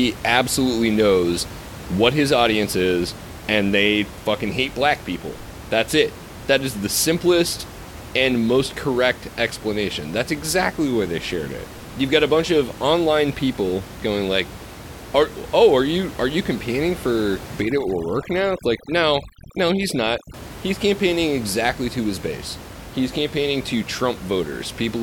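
From 17.62 to 20.34 s you can hear overdone noise removal kick in. The room noise, sitting about 16 dB under the speech, gets clamped so hard that the background drops and breaks up into little twinkling specks, the leftover bits of noise flickering on and off. The denoiser is cutting individual frequency bands whenever they look like its noise estimate, and the quieter parts of the speech get caught too.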